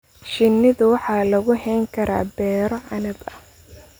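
A speech recording with a single block of digital silence at 2.78 s, where the audio path dropped a block of samples and output zeros in their place. The hole lasts about 1.45 ms, which fits a 64-sample processing block that was never filled in time. Because the signal cuts to zero and back with no fade, the two edges merge into a brief tick or dip rather than an audible gap.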